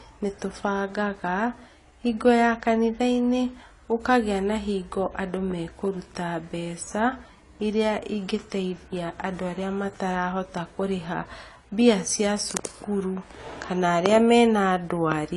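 Throughout the speech, the audio was likely squeezed through AAC compression at a low bitrate, consistent with about 32 kbps AAC-LC, so the encoder discarded detail: nothing survives above 11.5 kHz, leaving the sound dull and smeared, with a plainly audible warbling, fizzy edge on sibilants.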